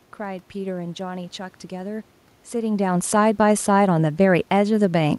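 No technical faults can be heard anywhere in the recording.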